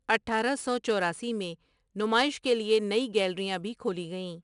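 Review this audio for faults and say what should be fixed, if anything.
A gritty hiss rides on the louder parts of the speech from start to finish, with roughness on sharp consonant attacks and nothing heard above about 10.6 kHz. This is 4-bit ADPCM compression: each sample is coded as a coarse 4-bit step from a prediction, so the error is a noise floor that rises and falls with the speech and smears attacks the step size cannot follow. The missing top end fits a sample rate near 22 kHz. To prevent it, keep the original or use a modern codec at a higher sample rate.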